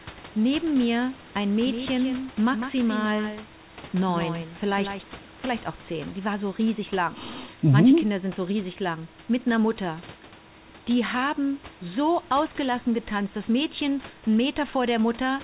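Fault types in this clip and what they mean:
Doubled audio track, 1.67 to 5.03 s: a copy trails about 150 ms behind, some 10 dB quieter, likely captured again by a slower path.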